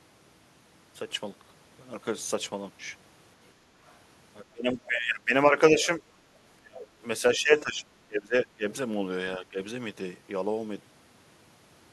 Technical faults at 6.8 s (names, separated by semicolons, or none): speech suppressed in double talk